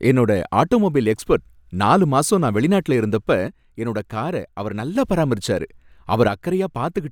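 A speech clip where the level sags abruptly by about 6 dB from 3.48 to 4.96 s, and again from 6.28 s to the end. That's most likely one channel drops out, with the remaining side carrying the mono sum at half strength.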